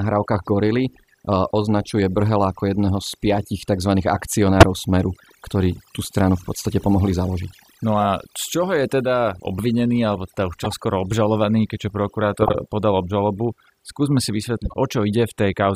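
Across the whole clip the background sinks to near silence speckled with twinkling specks. This is overdone noise removal: the reduction was set so strong that bands near its noise estimate are pushed almost to zero, taking quiet parts of the voice with them.

Short chirps and bursts of noise cut in at 0.43–0.46 s (faint), 4.60–4.63 s (a loud blip), 8.00–8.02 s just before "a z čoho je", 10.60–10.72 s between "obvinený alebo teda už" and "obžalovaný keďže", 12.37–12.55 s (the longest, loud) between "obžalovaný keďže" and "podal obžalobu", and 14.65–14.74 s. Each is a corrupt frame decoded. Damaged bits in one or a few compressed frames were played anyway, putting energy at the wrong frequencies for the length of those frames.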